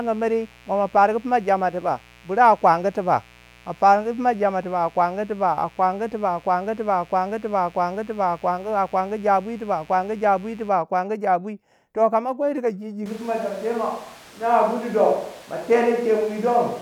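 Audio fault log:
0.00–10.69 s, mains buzz: a steady, raspy buzz sits under the speech at roughly 30 dB below it, then stops at 10.69 s. It is built on 60 Hz, and its edge comes from sharp switching spikes arriving twice per mains cycle, as from a dimmer, a rectifier or an unshielded cable. Those spikes spread harmonics of 60 Hz up into the kilohertz range, which is why it rasps rather than hums.
13.06 s to the end, switch to a distant microphone: right after "kama kwei chika ji" the speech abruptly turns roomy and hollow, loses bass, and drops by around 5 dB, while background room noise rises to roughly 25 dB below the speech. The change is sudden and does not switch back before the clip ends. The likely cause is that the close microphone's signal dropped out or was left out, leaving a microphone farther away, such as a camera's, that picks up more of the room.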